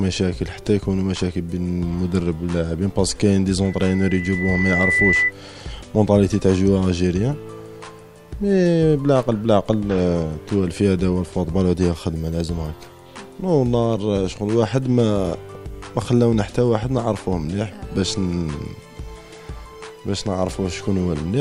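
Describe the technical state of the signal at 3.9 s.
Loudspeaker feedback squeal, 3.64 to 5.32 s: a microphone re-amplifies its own speaker at 2 kHz, swelling over roughly a second and a half to about 5 dB above the sound.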